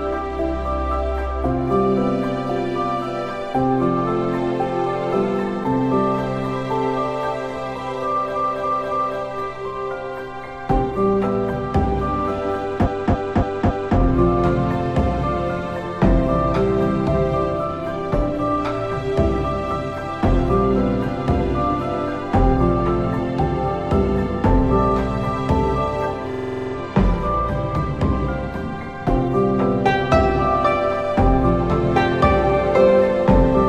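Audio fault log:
8.32–9.15 s, 12.82–13.94 s and 26.29–26.72 s, repeated frames: a stretch of compressed audio was decoded several times in a row, so the sound stutters and the clip grows longer. The first two repeat a block of about 0.28 s, 3 and 4 extra times, adding about 0.84 s and 1.11 s. The third loops a 46 ms block, which fits a single frame, 9 extra times, adding about 0.42 s. The waveform shows one identical segment tiled end to end, and the spectrogram shows the same patch copied side by side.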